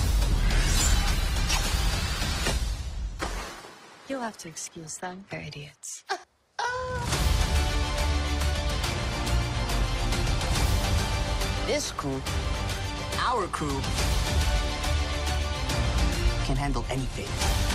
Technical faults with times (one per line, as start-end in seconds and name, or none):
0.00-6.00 adaptive stream starting at a low bitrate